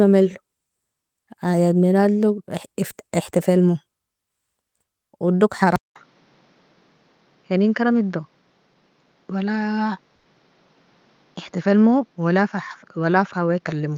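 At 5.76 s the speech breaks off for about 200 ms and returns duller, with nothing above roughly 6.9 kHz, a level about 5 dB lower and a new noise floor around 40 dB under the speech. This persists to the end. The likely cause is the input switched to a poorer device, such as a second microphone or a headset's call profile, whose narrower band, different tone and own self-noise replace those of the original input.

From 10.15 to 10.27 s there is a burst of packet loss. Roughly 100 ms of audio failed to arrive in time, and the receiver filled the gap by extending the last received sound and fading it, so the speech is carried over and fades instead of dropping to silence. When playback resumes, about 100 ms of the speech has been skipped.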